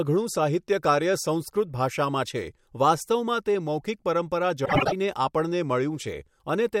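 From 4.65 to 4.93 s, frames out of order: two neighbouring 96 ms blocks play swapped, giving a garbled flutter, consistent with four frames each.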